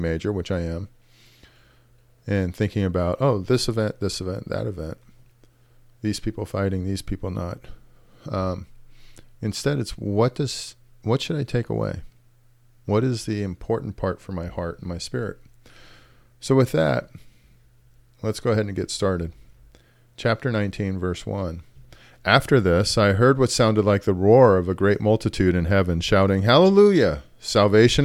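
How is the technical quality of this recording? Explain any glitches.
No glitches are audible anywhere in this recording.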